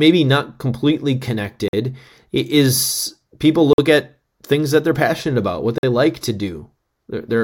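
At 1.68–1.73 s, 3.73–3.78 s and 5.78–5.83 s the speech breaks into 50 ms holes with hard edges: a gap between chunks. The audio was delivered in 2-second pieces with silence inserted at each join. Unlike a dropout, no sound is missing; it resumes exactly where it stopped.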